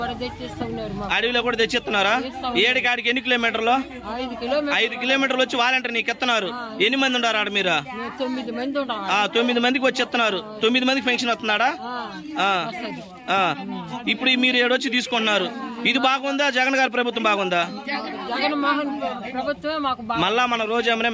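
Nothing stood out as a technical fault on listening to this recording.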